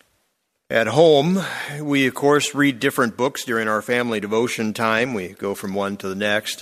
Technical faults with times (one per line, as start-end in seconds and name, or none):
none